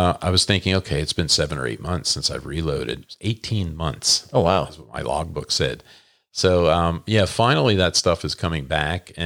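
No technical faults can be heard anywhere in this recording of speech.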